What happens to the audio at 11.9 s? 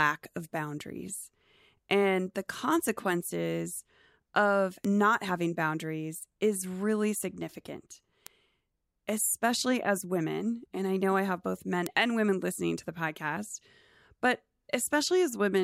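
At 11.87 s, right after "I have both men" and just before "and women listening to", there's a bit error spike: one sharp tick that cuts across the speech. A single sample has a flipped bit, so its value jumps by a power of two, up to about -6 dBFS, and snaps straight back. Because it's just one sample, the click is broadband and has nothing to do with what's being said.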